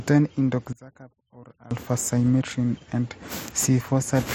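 From 0.73 to 1.71 s the speech sinks about 21 dB, likely one channel inverted cancelling the mono centre; the waveform visibly shrinks there.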